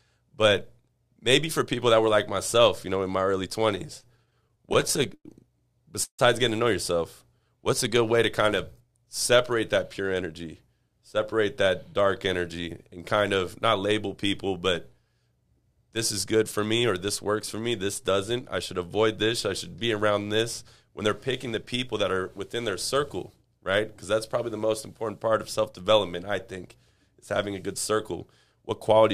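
From 3.75 to 5.26 s the sound stutters in repeated stalls: the jitter buffer kept running dry, and 17 short gaps, the longest about 99 ms, were filled by stretching the last sound. Unlike a single freeze, the sound drags in many small hiccups, nothing lost.

At 6.04 to 6.21 s comes one call audio freeze of about 149 ms, likely from packets held up in transit. A fading buzz or hiss gives way to roughly 90 ms of silence before the sound resumes where it stopped, now slightly later.

Jitter buffer speed-up follows at 8.42 to 10.33 s, 16.35 to 17.08 s, 20.36 to 22.13 s and 27.55 to 28.64 s. The receiver trimmed short pitch-period slices to shed built-up delay, running the sound 3 to 6% fast at unchanged pitch, hurried in the 6% stretches rather than interrupted.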